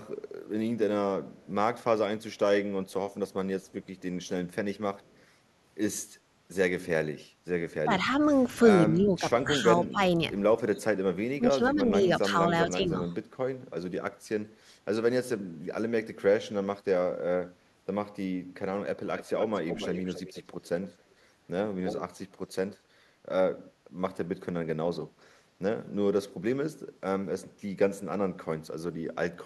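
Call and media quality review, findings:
Echo leak, likely from incomplete echo cancellation at the far-end loudspeaker side. Residual echo is returned as a delayed copy of the speech: faint at 1.31–1.47, 2.35–4.01 and 4.99–5.23 s (224 ms delay, roughly 35–40 dB down); much louder at 19.17–21.02 and 21.85–22.75 s (272 ms delay, roughly 10–15 dB down).

Speech suppressed in double talk, likely the echo canceller mistaking overlapping talk for echo and attenuating both. The talker's level dips in pieces at 7.83–8.31, 8.9–10.01 and 10.71–13.11 s, by up to roughly 20 dB, with the longest losses in the last stretch.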